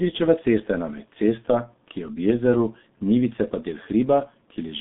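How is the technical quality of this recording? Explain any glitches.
Quality is poor throughout, limited by heavy G.723.1 codec damage across the whole recording. From start to end, the coarse frame-based coding, which fits a 6.3 kbit/s stream, confines the speech to about 150 Hz to 3.6 kHz with nothing above 3.8 kHz. It sounds muffled and hoarse, with smeared consonants, and a spectrogram shows a flat, empty band above the cutoff.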